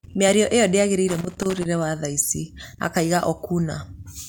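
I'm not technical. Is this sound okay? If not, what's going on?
No, there's a loose connector crackle from about 1.08 to 1.66 seconds in this speech. A worn or dirty contact somewhere in the cable or plug kept cutting in and out for about half a second, chopping the sound into that irregular scratchy burst.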